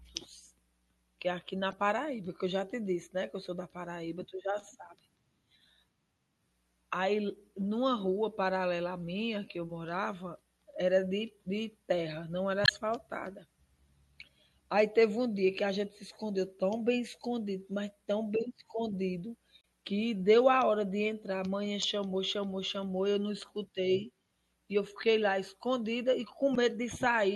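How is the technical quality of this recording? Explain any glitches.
The recording has plainly audible codec damage throughout and five brief decoding glitches.

Across the whole speech clip the sound has a watery, swirling quality, with smeared consonant attacks. This is likely MP3 compression at a low bitrate, consistent with roughly 64 kbps. The encoder drops high frequencies and weak spectral components that flicker between frames.

Short bursts of damaged data in a compressed stream occur at 1.70–1.73 s, 12.63–12.70 s, 19.60–19.64 s, 21.82–21.84 s and 26.54–26.57 s. Each is a brief chirp, squawk, click or short hole, where the decoder misread corrupted frames and resynchronised on the next valid header.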